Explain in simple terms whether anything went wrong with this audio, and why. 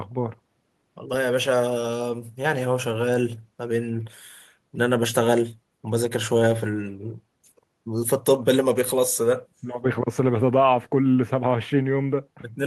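Nothing went wrong with this audio; there is no fault to hear in it, so there is no cause to explain.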